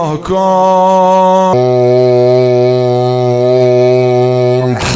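Wrong sample rate from 1.53 s onward: the sound slows to two-thirds speed and drops 7 semitones, as if 24 kHz audio were played at 16 kHz.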